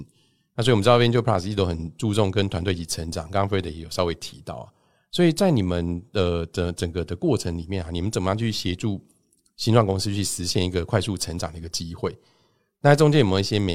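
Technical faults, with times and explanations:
No technical faults can be heard in this speech.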